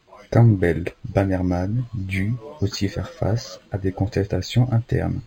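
Throughout, imaging from linear upsampling: straight-line interpolation from 11 kHz to 44.1 kHz dulls the top and leaves faint mirrored images, roughly 30 dB down, near 5.5–11 kHz, adding metallic shimmer to sibilants.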